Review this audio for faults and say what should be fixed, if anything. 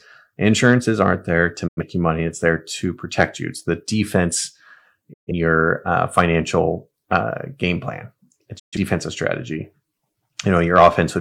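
Digital broadcast dropouts in the speech at 1.67–1.83 s, 5.12–5.32 s and 8.58–8.77 s: the receiver muted after corrupted frames, with quick 20 ms fades into short silences. Unlike packet-loss concealment, nothing fills the gaps. A stronger signal or better error protection would prevent this.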